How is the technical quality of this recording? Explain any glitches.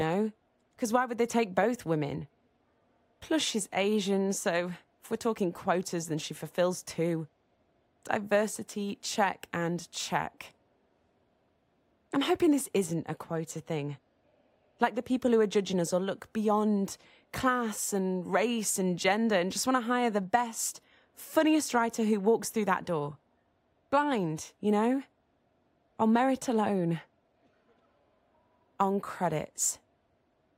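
No glitches turn up anywhere in this speech recording, and the signal comes through technically intact.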